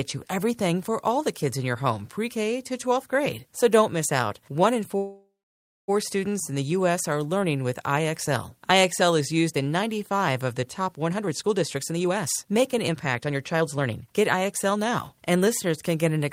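At 4.97 s the speech stalls for about 0.9 s, until 5.9 s, right before "students in". The last sound is drawn out as a fading buzz, then goes quiet for roughly 0.58 s before the talker picks up exactly where they left off, with nothing lost. That's a call audio freeze, most likely packets held up in transit so the jitter buffer ran dry and the receiver had to stretch what it had.

From 11.09 s, just after "of the top", to 16.21 s, you get a jitter buffer speed-up. The speech runs about 117% of normal speed with the pitch unchanged, so it sounds hurried rather than chipmunky. The buffer was holding more audio than it wanted, so the receiver kept snipping out short pitch-period-sized chunks, around a second in total, to claw the delay back down.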